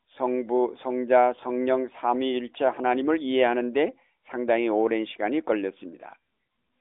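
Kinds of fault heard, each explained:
Nothing stood out on listening that would count as a fault.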